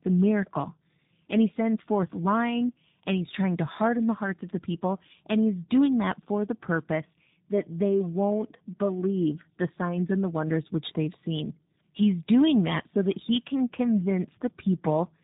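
From start to end, the speech carries tandem speech coding. It passed through two speech coders in a row, and the second worked on what the first had already damaged. The sound points to a CVSD stage, then a G.711 mu-law link, then G.729A at a low bitrate. Nothing comes through above 3.8 kHz, so the speech is muffled. The stacked coding adds roughness and a warbling, watery texture.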